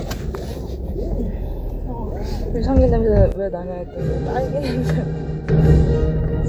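A drift correction step affects this recording of everyday sounds from 0.98 to 3.07 s. Playback runs 6% fast and pitch rises by 101 cents, roughly a semitone, before snapping back. This is likely a clock-matching stage changing its rate in one jump to manage its buffer. A sudden gain jump follows from 3.32 to 5.49 s, where the sound and its background noise drop together by about 10 dB, then return, consistent with a digital gain setting applied abruptly without any ramp.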